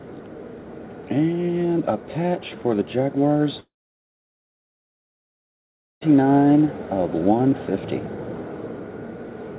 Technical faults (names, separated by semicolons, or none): long network dropout